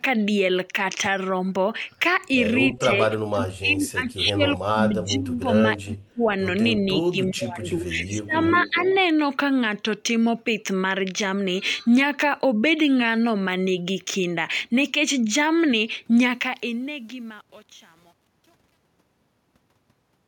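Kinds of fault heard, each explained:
Speech suppressed in double talk: at 2.75–4.41, 4.57–5.49, 5.83–6.34, 6.87–8.35 and 8.51–8.83 s, the speech repeatedly dips and breaks up, falling by about 10 to 30 dB at its deepest, with the worst drop near 6 s. The likely cause is an echo canceller that could not tell this talker apart from loudspeaker echo while the far side was also speaking, so it attenuated both together.
Echo leak: at 7.99–8.12 s and again at 8.48–9.01 s, a faint delayed copy of the speech trails the original by 381 ms, about 20 dB and then about 15 dB below it. This is likely sound from a loudspeaker on one side of the call that its microphone picked up and its echo canceller failed to fully remove. That residue came back down the line.
Truncation distortion on a fade: from 16.23 s to the end, the fade-out turns gritty as the level falls. It is worst from about 17.0 s onward. 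The fade's gain shape is smooth, but its output keeps too few bits and has no dither, which fits roughly a 9-bit word length. Low-level waveforms therefore collapse into a few coarse square steps.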